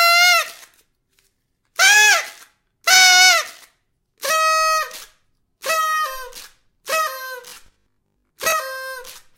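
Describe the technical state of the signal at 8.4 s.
A rigid, metallic 50 Hz buzz runs from 7.48 to 8.52 s: robotic sound from repeated short buffers, likely from about half the audio being replaced by repeats of a 20 ms chunk.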